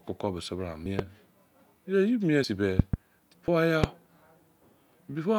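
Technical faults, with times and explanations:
0.86, 1.6, 2.44 and 3.48 s: dropped buffer (overrun). Each is a jump forward in the speech, with no gap of silence. The first comes just after "bise bira". Around 70 ms vanishes at 0.86 and 2.44 s, and around 20 ms at 1.6 and 3.48 s. Likely the recording software failed to collect samples before the hardware overwrote them.
0.99, 2.79 to 2.96 and 3.84 s: loud pop. A sharp pop sits on top of the speech, which continues underneath. The first follows "bise bira" and peaks about 15 dB above the speech. Two pops come in quick succession at 2.79 to 2.96 s, and one at 3.84 s. Those three peak about 20 dB above the speech. Likely a sudden voltage pulse, shaped by the circuits after it.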